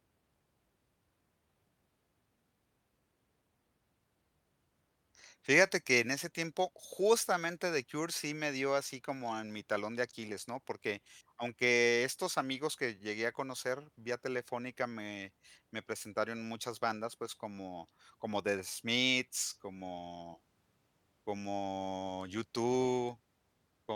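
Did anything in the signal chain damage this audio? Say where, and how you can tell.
No, nothing in the signal chain stood out as having damaged this recording when I listened to it.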